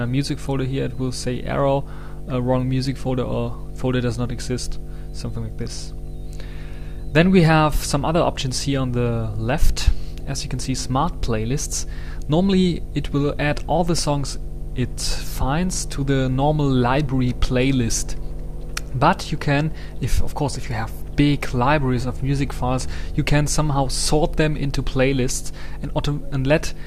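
From the first second to the end, a steady mains hum sits under the audio at 50 Hz. Power-line current is leaking into the signal path, most plausibly through a ground loop between connected equipment or magnetic pickup from a nearby transformer. It comes across as a constant low drone with some low harmonics. At roughly 15 dB below the wanted signal, it is clearly audible throughout and never fades.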